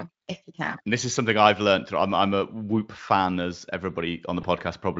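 At 4.41 s, a VoIP packet loss concealed by the speech codec: one 20 ms frame, likely a single packet, went missing, and the Speex decoder guessed it from the preceding pitch and filter at falling gain. Until about 4.45 s the speech smears into a brief buzzy tone or coloured noise that fades.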